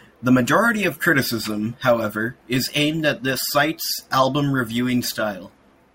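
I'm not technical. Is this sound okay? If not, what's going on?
Yes, no technical faults are audible anywhere in this speech recording.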